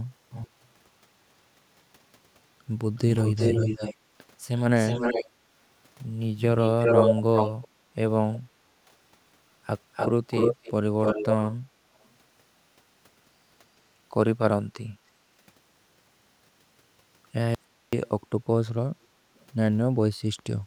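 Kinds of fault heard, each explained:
Echo leak: the speech comes back as a delayed copy about 370 ms late, later 297 ms, sometimes as loud as the original, likely a speakerphone's echo canceller letting it through.
Audio dropout to a faint residue: at 17.55 s the speech cuts out abruptly for 380 ms, leaving only very faint hiss, likely a brief loss of signal.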